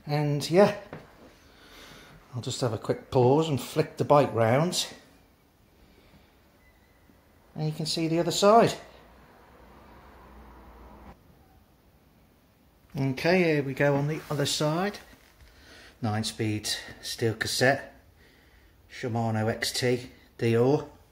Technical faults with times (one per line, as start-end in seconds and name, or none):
none